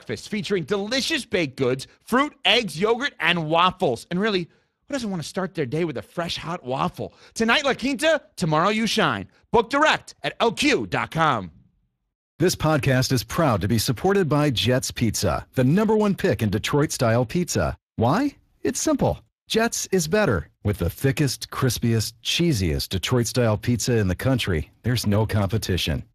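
Speex codec damage runs through the whole speech recording, plainly audible, and consistent with a rate near 22 kbps. The CELP coder has too few bits to rebuild the excitation signal faithfully, so the speech sounds noisy and hoarse, and nothing reaches above 15.4 kHz.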